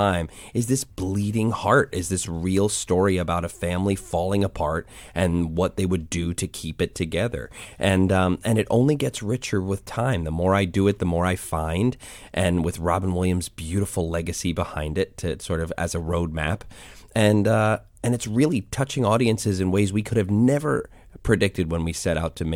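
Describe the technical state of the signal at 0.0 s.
The signal is intact at 0.0 s, with no fault present at that moment.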